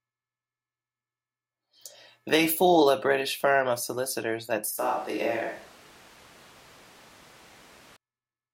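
From 4.79 to 7.96 s, after "firm of solicitors that", speech jumps hollow, thinner, quieter and noisier, unlike added reverb: likely a switch to a distant microphone.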